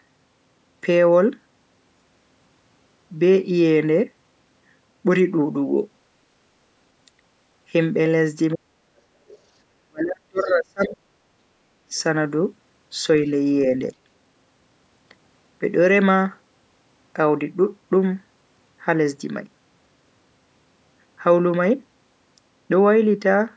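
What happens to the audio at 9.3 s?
The other side's voice leaks through from 9.28 to 9.38 s: a brief, very faint scrap of a second voice, likely loudspeaker echo the canceller failed to remove.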